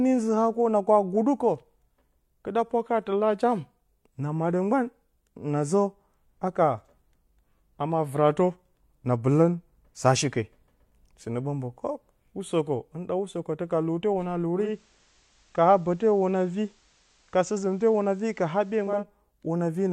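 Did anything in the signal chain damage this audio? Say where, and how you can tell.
Yes. Right after "ka lute hwuna", at 14.55 s, the tuner does a digital radio blend to analogue FM over about 256 ms. It stays there until 19.07 s. Faint hiss comes up, though the level holds steady.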